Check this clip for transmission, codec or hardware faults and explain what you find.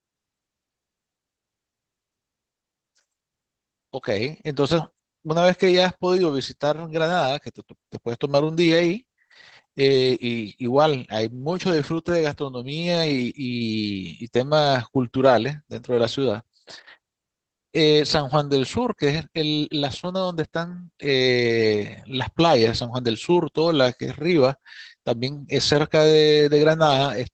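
The speech is degraded throughout by Opus voice compression. A low-rate linear-prediction coder, consistent with Opus SILK mode at about 12 kbps, caps the band at 8 kHz and codes the excitation coarsely, leaving the speech plainly muffled, hoarse and slightly robotic.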